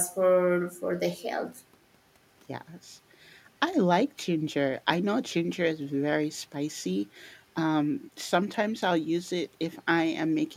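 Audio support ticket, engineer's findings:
No faults found in recording.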